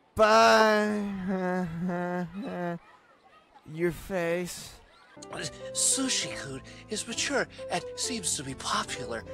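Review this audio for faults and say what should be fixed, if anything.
No faults; nothing needs fixing.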